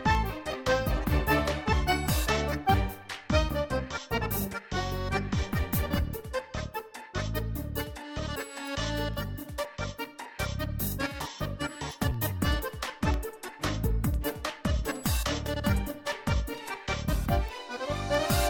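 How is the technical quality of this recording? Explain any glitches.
Technical quality suffers from periodic USB or driver dropouts. From 0.15 s to 18.15 s, something blocks the audio path once every 1.0 s, and a fraction of a millisecond of audio is replaced with silence each time. The result is around twenty evenly spaced ticks that sound whenever signal is present.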